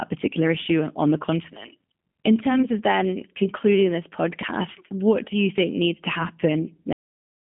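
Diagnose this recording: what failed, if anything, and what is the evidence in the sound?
Throughout, the speech sounds narrow and slightly rough and synthetic. Nothing sits above about 3.6 kHz, and the low end thins out below roughly 150 Hz. That points to the codec stage: this is G.729 coding damage. The sound fits an 8 kbit/s G.729A stream, which rebuilds each 10 ms frame from a vocal-tract filter, a pitch predictor and a few coded pulses. The coarse reconstruction leaves that plainly audible, artificial texture.

At 6.93 s the speech stops mid-sound and falls straight to digital silence, with no decay or tail, and stays silent to the end. This is a cut-off end, and it points to the buffer or storage stage. The final stretch of audio was never written out or played, so the recording simply ends partway through a sound.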